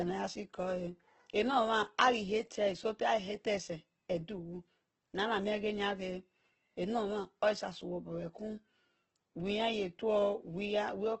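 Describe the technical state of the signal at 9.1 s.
At 9.1 s the speech sounds rough and grainy, its top end noisy and cut off above 8.1 kHz, as throughout the clip. The likely cause is heavy Opus compression in CELT mode, filling bit-starved bands with folded or noise content, which fits roughly 12 kbps.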